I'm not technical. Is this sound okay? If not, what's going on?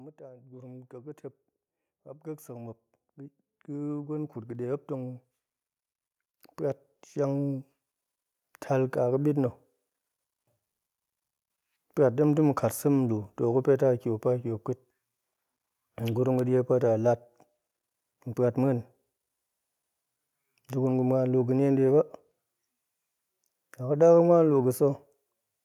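No. Twice the level creeps upward on its own: from 0.16 to 1.25 seconds, and again, a bit more strongly, from 3.66 to 5.29 seconds. The voice and the background hiss or room sound get louder together, as if someone were slowly turning up a volume knob. This is automatic gain rising: the recording device decided the input was too quiet and raised its own volume step by step, lifting everything it picked up.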